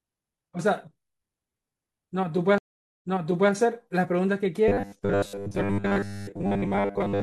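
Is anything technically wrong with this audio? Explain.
Yes, there are two faults. A stream reconnect occurs from 2.58 to 3.52 s: the connection dropped, leaving about 0.43 s of silence, then a fresh decoder resumed playback 0.51 s earlier, repeating speech. From 4.68 s to the end, the speech becomes a rigid metallic 100 Hz buzz. This robotic sound is likely from repeated short buffers, with roughly 10 ms chunks recycled in place of most of the real audio.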